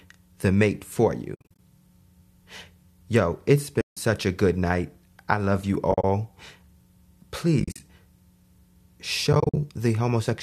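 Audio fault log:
1.35–1.59 s (after "the mate for"), 3.81–3.97 s (before "a good night I"), 5.92–6.04 s (after "night I love you"), 7.60–7.80 s and 9.33–9.57 s, AAC frame loss with muting: the decoder zeroed the missing frames, leaving soft-faded holes of 80 to 170 ms. Unlike a hard dropout, each hole is smoothed by the overlapping windows. In four of the five, the gaps come in short broken runs of up to about 70 ms. The short blocks fit the roughly 10 ms frames of the likely low-delay AAC coding.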